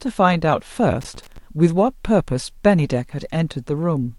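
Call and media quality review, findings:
Loose connector crackle, 1.01 to 1.38 s: irregular scratchy burst over speech. Probable worn or dirty cable contact intermittently breaking the signal.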